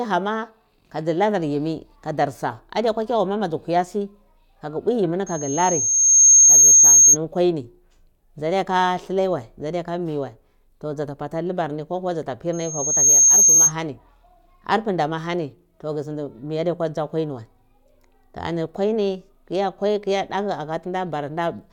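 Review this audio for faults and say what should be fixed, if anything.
The microphone is picking up its own loudspeaker, and near 6.4 kHz the loop gain passes one. The result is a loudspeaker feedback squeal at 5.26 to 7.17 s, after "kagu bwi yimi ni", swelling over about a second to roughly 15 dB above the speech. It recurs at 12.53 to 13.73 s, after "libarni ko kuwa dza", rising in about half a second to roughly 10 dB above. To prevent it, move the microphone away from the loudspeaker and cut the gain or notch out the region around 6.4 kHz.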